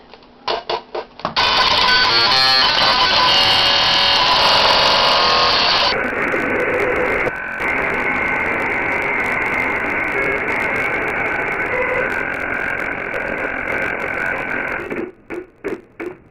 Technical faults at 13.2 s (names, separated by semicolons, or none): interleaved audio read as planar